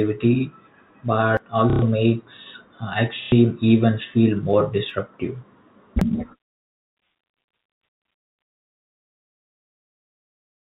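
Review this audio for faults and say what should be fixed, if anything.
Three jumps in the speech at 1.37, 4.90 and 6.01 s, roughly 70, 20 and 50 ms skipped; likely a dropped buffer (overrun), where the app fell behind the hardware. Bigger buffers or a higher-priority audio thread would stop that.

Packet loss with last packet repeated shows up at 1.70 to 1.82 s and 3.23 to 3.32 s, a robotic stutter from replayed packets that fits 30 ms packets. Proper concealment, or a larger jitter buffer, would smooth those gaps. The G.711 telephone band itself comes through fine.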